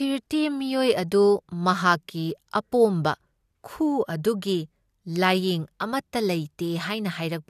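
No technical faults can be heard anywhere in this speech recording. There is nothing to place on a timeline, since no event in the audio marks a failure of the recording or playback chain.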